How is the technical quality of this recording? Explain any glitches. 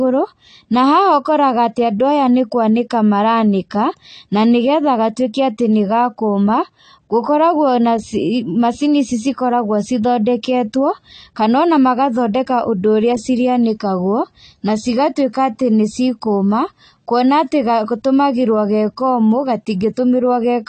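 The recording has plainly audible AAC compression damage throughout. Nothing survives above 8.5 kHz, and the speech sounds dull and smeared, with a warbling, fizzy edge on sibilants. The likely cause is AAC-LC coding at a low bitrate, around 32 kbps. The codec quantised away detail and thinned the spectrum, which a clean low-pass filter alone would not do.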